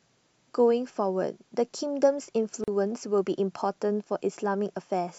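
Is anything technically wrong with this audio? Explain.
Yes. At 2.64 s the speech breaks for about 39 ms, ending at 2.68 s: a gap at a join of encoded pieces. Separately encoded pieces were joined untrimmed, leaving encoder delay and padding. The silence has smeared edges, then the speech resumes where it stopped.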